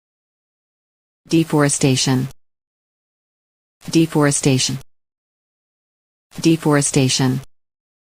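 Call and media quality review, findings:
Compressed frames skipped at 1.25–1.32 s and 4.69–4.72 s. Audio jumps ahead about 70 ms, then about 100 ms, consistent with several 20 ms codec frames dropped.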